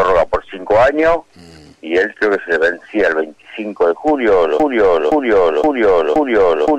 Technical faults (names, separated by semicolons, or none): broken-record loop